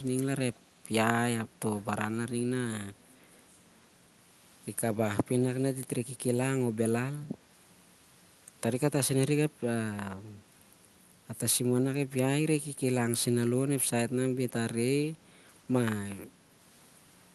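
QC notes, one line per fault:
0.55–0.59 s, echo leak: a brief, very faint scrap of the voice returns about 282 ms after the original, far below the speech level. This is likely leftover audio from a far-end loudspeaker that the echo canceller failed to fully remove before it was sent back. Unlike room reverberation, which trails smoothly from the sound, this is a single detached copy arriving well after the original.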